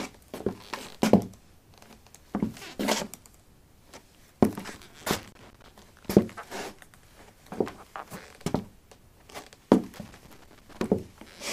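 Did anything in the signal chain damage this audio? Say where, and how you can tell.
Yes. A loose connector in the analogue wiring intermittently broke contact, producing loose connector crackle from 5.01 to 5.68 s and from 9.94 to 10.82 s. Each burst is irregular crackle and scratching, as the flickering contact chops the signal and jolts any DC present.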